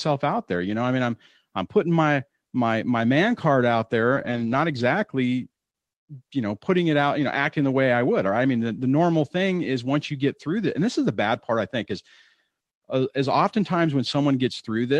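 At 4.15 to 4.53 s comes a lost packet rebuilt from error correction. Missing packets were replaced by low-bitrate copies from the following packets. About 200 ms sounds rough and noisy, with no gap. A short repeat at 7.63 to 7.65 s fits one 20 ms packet.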